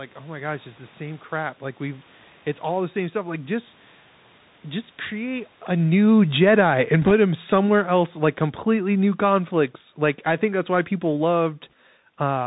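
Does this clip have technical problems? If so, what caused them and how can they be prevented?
Yes. Throughout the clip the speech sounds thin and muffled, with nothing above 4 kHz, scratchy s sounds and a granular hiss underneath. This is the Bluetooth CVSD headset codec, whose one-bit up-or-down steps, consistent with a 64 kbps link, cannot follow fast high-frequency detail. Using a wideband headset profile, such as mSBC or LC3, prevents this.

From 5.79 s to 11.55 s the level sinks steadily by about 11 dB, and the background drops with it. This is automatic gain falling: the gain control judged the input too loud, or its background noise too strong, and backed its gain off gradually. It is separate from the talker moving near 5.5 s. Setting a sensible fixed microphone level, or a slower, gentler gain control, prevents it.

At 7.02 to 7.11 s, and again at 11.70 to 11.73 s, a brief rushing crackle sits over the speech, with no sharp clicks. 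The first burst is rougher. These are bit errors on a Bluetooth voice link, with an error rate of roughly 3 percent and then 1 percent. Each flipped bit nudges the signal only slightly, so the damage comes out as noise rather than pops. Keeping the headset close to the phone and away from interference prevents it.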